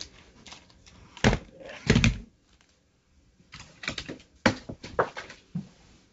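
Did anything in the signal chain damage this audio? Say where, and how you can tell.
No, nothing in the chain did any damage here: the audio has simply come through a call path, and the way everything stops at about 7 kHz is just the normal ceiling of a wideband call codec, which fits G.722 at around 64 kbps.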